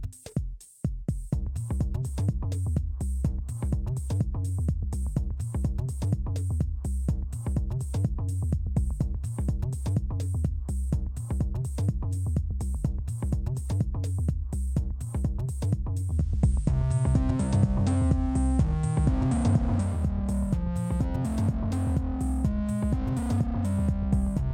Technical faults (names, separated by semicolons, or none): digital radio blending to analogue